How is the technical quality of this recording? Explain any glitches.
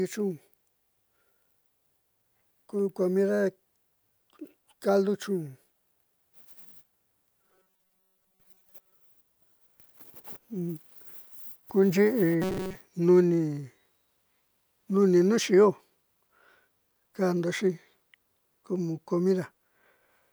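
Two stretches of robotic sound from repeated short buffers, at 7.43 to 8.97 s and 12.42 to 12.75 s. The speech turns into a rigid, metallic buzz at 188 Hz, likely from audio arriving late while the last roughly 5 ms chunk keeps looping and most real audio gets skipped.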